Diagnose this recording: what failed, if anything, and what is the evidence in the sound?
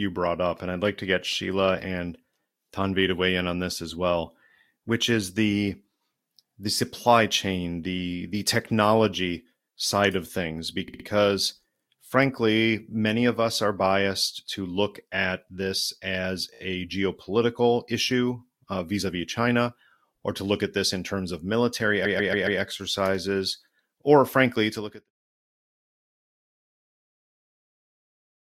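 Repeated frames, a codec or transport fault: short blocks of compressed audio replay in a stutter. After "technology side of things", a 68 ms block at 10.88 s plays three extra times (174 ms added). After "look at this as", a 17 ms block at 16.54 s plays four extra times (70 ms added). After "in terms of military", a 139 ms block at 22.05 s plays four extra times (557 ms added). Spectrograms show identical side-by-side tiles.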